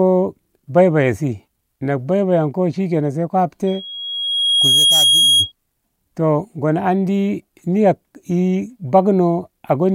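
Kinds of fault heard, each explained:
Loudspeaker feedback squeal: The microphone is picking up the loudspeaker it feeds. At one frequency the loop gain passes unity, so that tone keeps feeding itself. Here a single pure tone near 3.3 kHz appears at 3.67 s. It swells over about a second until it sits roughly 5 dB above the speech. It holds as a piercing whistle and stops at 5.52 s, when the loop is broken.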